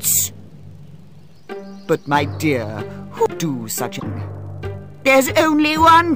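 At 3.96 s, lasting about 66 ms until 4.03 s, the sound breaks into a brief garbled blip caused by damaged data in a compressed stream. A stretch of the encoded bytes is corrupt, so the decoder misreads those frames, loses its place and has to hunt for the next valid frame header before playback recovers. Unlike a clean dropout, which is simply silence, or a single-sample click, the artefact comes from the decoder losing and regaining sync within the stream.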